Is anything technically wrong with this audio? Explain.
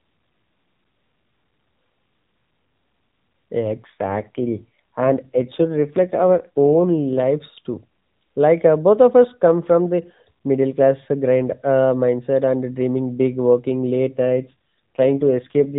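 Yes. Twice the speech turns rougher and more synthetic: from 3.76 to 7.24 s, and again from 14.27 s to 15.77 s, just before the end. The band stays narrow and telephone-like, with nothing above 4 kHz, and nothing drops out. Only the texture coarsens into a buzzy, artificial quality. This is an AMR rate drop. On a weak link the mobile network tells the AMR codec to spend fewer bits on the voice and more on error protection. The change in quality fits a step from the 12.2 kbps mode down to 5.9 kbps, with the higher rate returning in between.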